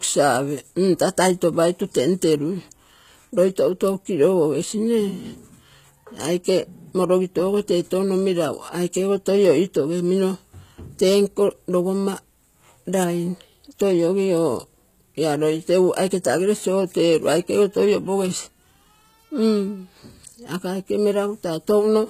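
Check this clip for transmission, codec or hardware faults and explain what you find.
One codec fault runs through the whole clip. The speech is likely HE-AAC compressed, with plainly audible damage, which fits a bitrate near 20 kbps. The treble is rebuilt from lower bands, so its harmonics misalign. Sibilants sound gritty and metallic. Nothing remains above 14.9 kHz.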